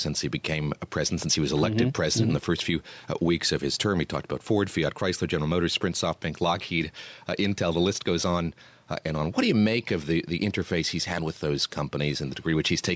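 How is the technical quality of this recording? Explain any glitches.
The recording has one problem that runs through the whole clip: gain pumping. The room's background noise sits about 43 dB below the speech, and the call's microphone processing leaves nothing above 8 kHz.

Gain pumping is present from start to finish. The level breathes, with a swing of around 5 dB. The likely cause is microphone gain set far too high, with a fast limiter or compressor pulling it down on each loud syllable. Peaks and quiet passages end up squeezed together, so the sound is flat and squashed. On a waveform, the peaks look evenly limited in height and the noise floor bulges up between phrases. On a spectrogram, the background band brightens in the gaps and dims under each utterance.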